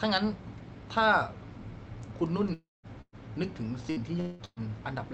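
From 2.53 to 2.86 s the sound smears into a fading buzz or hiss and then goes quiet for about 0.17 s, with roughly 0.3 s lost. It sounds like a long network dropout is the likely cause. A burst of packet loss follows at 3.01 to 3.15 s, with 120 ms gone and a held, decaying tail ending in a brief silence. Another comes at 3.90 to 3.99 s, where 60 ms are patched over. From 4.20 to 4.42 s there's likely a second long dropout: about 180 ms are missing and filled by concealment that never quite reaches silence. The last is a packet-loss burst at 4.45 to 4.59 s, with 120 ms dropped and a short fade to nothing.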